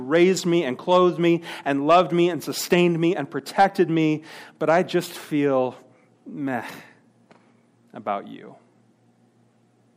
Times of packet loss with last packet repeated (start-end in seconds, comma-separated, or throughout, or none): none